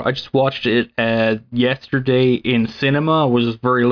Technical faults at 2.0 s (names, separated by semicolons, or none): none